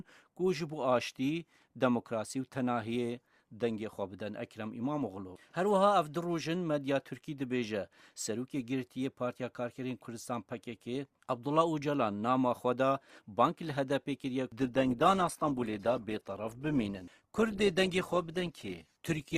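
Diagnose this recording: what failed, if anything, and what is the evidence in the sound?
At 14.61 s the sound abruptly drops in quality and stays that way to the end: codec smearing appears at once, with no gap. That's an adaptive stream at a lower bitrate, a network-side step down, which fits Opus dropping from around 64 to 16 kbit/s.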